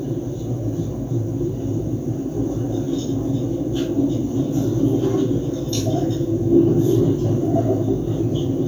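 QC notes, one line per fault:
No technical faults are audible anywhere in these sounds.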